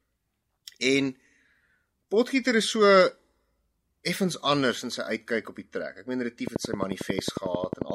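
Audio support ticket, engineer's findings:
Train of clicks, 6.47–7.91 s, speech clip. Regular ticking at 11.2 clicks per second, about fifteen in total, peaks roughly 15 dB above the signal, audible over the speech and in gaps. Likely cause: nearby equipment interference or a faulty connection or power supply injecting repeated, similarly shaped pulses.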